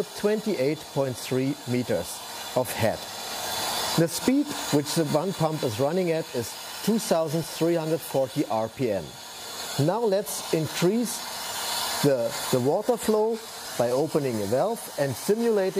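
At 7.44 s there is a repeated buffer. New audio failed to arrive in time, so the device played its last block again, once more. The repeated piece lasts 5.8 ms, which fits a 256-sample buffer. Because the block is so short, the repeat is heard as a click or brief buzz rather than a clear stutter. Each join between copies is hard. About 5 ms of audio goes missing here.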